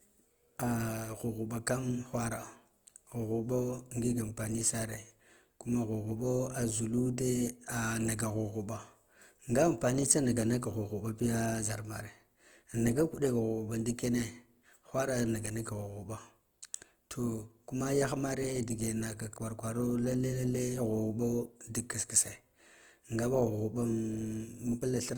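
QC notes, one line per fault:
Throughout, Opus compression: the speech sounds rough and grainy, with a noisy texture, yet the top end stays open, reaching about 20.2 kHz. The likely cause is Opus in its music (CELT) mode at a low rate, which fits about 24 kbps. The encoder keeps each band's energy but, starved of bits, fills the detail with noise and copies of lower bands. That leaves few holes but turns the tone coarse.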